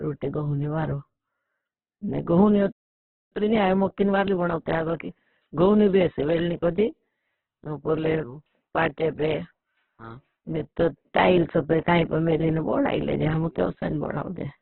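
A short speech recording carries heavy codec damage throughout, most likely from Opus compression at a very low rate; the roughness and grain point to its CELT mode running at around 8 kbps. Instead of the swirling holes of MP3, the energy in each band is kept but filled with folded or noisy content, so the voice sounds rough and grainy. The band is narrowband: a spectrogram shows a hard ceiling with nothing above about 4 kHz, and the bands below look smeared and speckled rather than cleanly harmonic. At 2.72 s the sound cuts off mid-flow in a playback stall lasting about 0.59 s, to 3.33 s, which was likely the player running out of data or having its thread blocked. On the waveform this is a flat line dropping straight out of active signal, and on a spectrogram it is a clean vertical gap across all frequencies. When sound resumes at 3.33 s, time-compressed catch-up follows until 6.33 s. 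The player works off its backlog by cutting and cross-fading short pieces, so the speech runs about 1.15 times fast while keeping its normal pitch. A spectrogram shows syllables packed closer together and harmonic traces unchanged in height, with small discontinuities where the pieces are joined.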